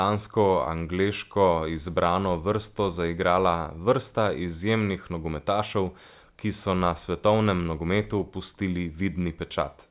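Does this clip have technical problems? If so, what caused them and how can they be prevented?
No, nothing stood out on listening to this speech clip.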